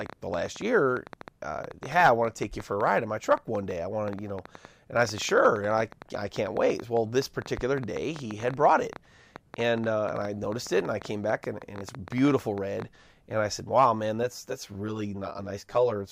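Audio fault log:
0.01–12.83 s, train of clicks: A run of about a hundred sharp, similar-shaped pulses sits over the speech at roughly 9 per second, spaced unevenly, and they carry on through the pauses until just before "and I said". Peaks rise a few dB above the speech itself, so they read as a ragged ticking layered on top of the audio. The likely cause is electrical interference from nearby equipment or an interface dropping in and out.
14.23–16.12 s, channel delay (comb filtering): Through the final stretch one channel runs around 10 ms behind the other, and the two are summed to mono. Content shared by both channels cancels wherever the offset puts them in opposite phase, giving a first notch near 50 Hz and further notches repeating at about 100 Hz intervals. At this delay the speech sounds rough and slightly doubled.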